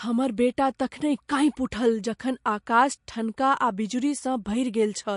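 Throughout, the speech carries plainly audible MP3 compression: nothing above 10.5 kHz, with a watery, swirling texture as weak frequency lines drop in and out between frames. A simple low-pass filter wouldn't swirl. The damage likely comes from an encoder starved of bits, fitting a rate near 48 kbps.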